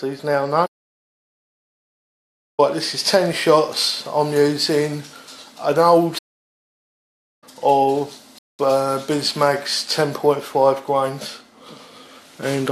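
The audio has two playback stalls and one rebuffering stall. From 0.66 to 2.60 s the sound stops in mid-flow for about 1.9 s, and from 6.18 to 7.44 s it stops again for about 1.2 s, each time going fully silent before carrying on. On a waveform these are flat, near-silent stretches; on a spectrogram they are blank vertical bands across all frequencies with hard edges on both sides. The likely cause is the player running short of data or its output thread being blocked, so nothing reached the output until it recovered. At 8.38 s there is a shorter rebuffering stall: the sound cuts to silence and resumes exactly where it left off at 8.59 s, adding about 0.2 s to the running time without dropping any material. This is the player waiting for more downloaded audio before continuing. It shows as a narrow empty gap in the waveform and a thin blank column on the spectrogram, with the signal on either side joining up seamlessly.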